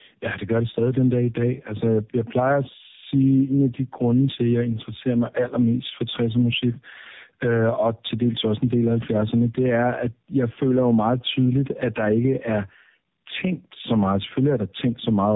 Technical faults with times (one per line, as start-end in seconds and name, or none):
0.00-15.35 gain pumping
0.00-15.35 tandem speech coding